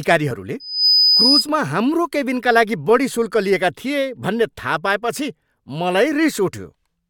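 From 0.60 to 1.48 s, loudspeaker feedback squeal: a 5 kHz tone swells over roughly a third of a second to about 5 dB above the speech, showing as a bright horizontal spectrogram line.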